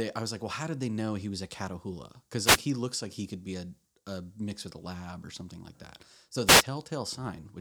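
Speech, hit twice by a wireless microphone noise hit: short swishes of static at 2.44–2.58 s, just before "he looks like he", and at 6.46–6.63 s. Each is the FM radio link fading as reflections cancel, letting receiver noise burst up over the voice.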